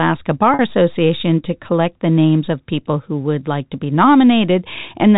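At 0.54 s, packet loss with pitch repetition: about 50 ms of audio went missing, which fits a run of several short packets dropped together. The receiver filled the hole by repeating the last pitch period of the speech and fading it down. The gap runs to 0.59 s and sounds like a brief held, buzzy tone rather than a dropout. The telephone-band sound of the G.711 coding, with nothing above 4 kHz, continues unchanged on both sides of the gap.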